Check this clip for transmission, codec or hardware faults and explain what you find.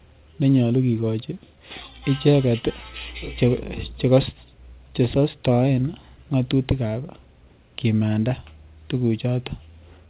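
Three related faults show up in this speech, carried over a call link whose G.711 mu-law coding leaves nothing above 4 kHz.

Clock drift between sender and receiver runs through the whole clip. The sending device's audio clock is about 2% slow relative to the receiver's, so packets arrive a little more slowly than they are played out. The jitter buffer keeps draining and has to be topped up. The result is a recurring unsteadiness in timing rather than any single obvious break.

Repeated timing corrections, from 0.41 s to 10.08 s, are how the receiver copes with that drift. Because the incoming stream is short, it keeps stretching the audio by repeating small pieces, all in the same direction and at uneven spacing. That plays the speech at about 98% speed and adds something like 150 ms in total. Each edit is tiny, so it comes across as a faintly dragging, slightly uneven pace and occasional soft hiccups.

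Scattered short gaps fall between 2.31 s and 5.07 s. Roughly five packets came in late, one at a time, and the receiver filled each hole by carrying the previous sound forward. The patches add up to around 40 ms, the longest only a few milliseconds, covering about one percent of that stretch. They are heard as brief ticks or small smears in the speech, not as audible dropouts.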